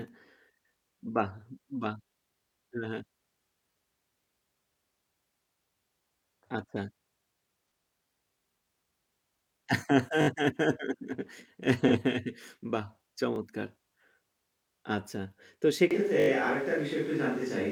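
A speech recording with three kinds of fault. Brief stutters, where a tiny slice of sound repeats with a hard join, occur at 3.72 s, 10.22 to 10.28 s, 13.36 s and 16.2 to 16.28 s. These are a repeated buffer, with the last block replayed once to four times, which fits a 20 ms buffer. At 7.71 s and 11.87 to 11.92 s, short smeared, noisy patches mark AAC frame loss with concealment, where the decoder fills a missing 42.7 ms stretch from the previous spectrum. From 15.91 s to the end the voice suddenly turns roomy and hollow with less bass, with background noise around 25 dB below the speech but little level change. This likely comes from a switch to a distant microphone.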